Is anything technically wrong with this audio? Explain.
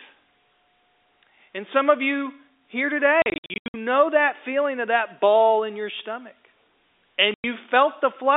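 Yes. There is packet loss filled with silence on what sounds like a G.711 telephone-band line (roughly 300 Hz to 3.7 kHz). Between 3.22 and 3.74 s, about 340 ms of audio drops out in scattered holes, the longest about 80 ms. At 7.34 to 7.44 s there is one solid 100 ms gap. The gaps fall in 20 ms steps, which fits 20 ms packets. The receiver inserts digital silence for each missing packet, so the speech is chopped by holes with hard edges.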